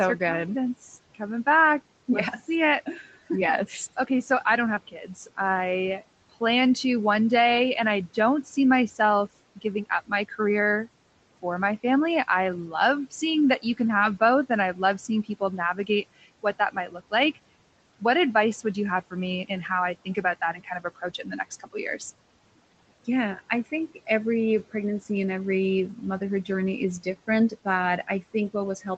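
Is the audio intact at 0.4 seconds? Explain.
Yes, the audio is intact at 0.4 seconds, with no fault at that moment.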